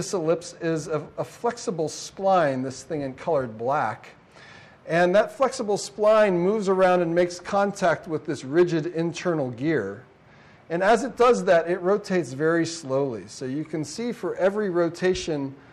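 Nothing stood out on listening to this recording.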